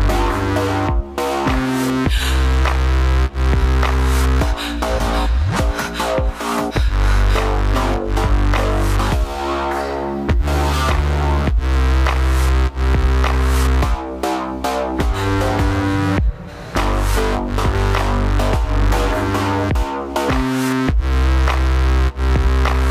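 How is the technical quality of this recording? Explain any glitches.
No technical glitches can be heard anywhere in this recording.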